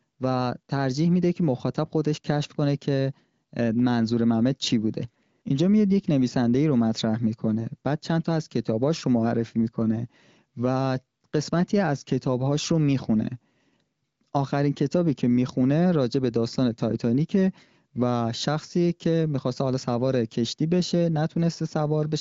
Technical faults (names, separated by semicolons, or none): none